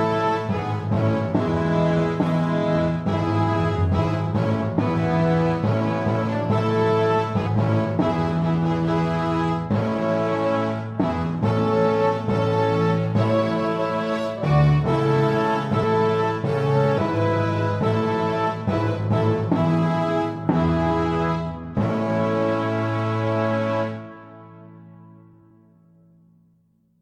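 The sound jumps forward three times, at 7.46 s, 15.82 s and 16.97 s, each jump marked by a short smeared blip. These are compressed frames skipped: runs of 26.1 ms frames, several, a handful and around fifteen, never reach the output, so roughly 200 ms, 150 ms and 300 ms of material vanish. Unlike a dropout, no silent gap appears, and overlapping frames blur each join instead of leaving a sharp click.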